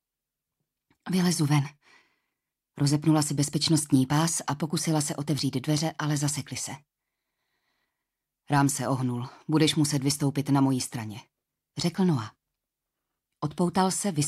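No technical faults can be heard anywhere in this audio.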